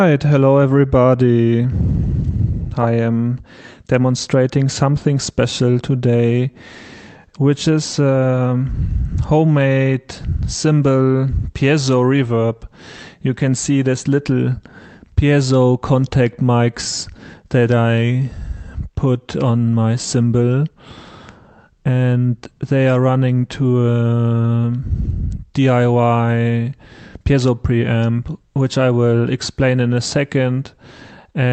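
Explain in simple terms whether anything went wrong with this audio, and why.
Nothing stood out on listening; the audio has the narrowed, compressed character of an ordinary internet call, with no dropouts, glitches or other problems to point to.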